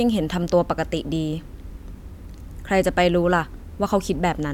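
No technical faults are audible.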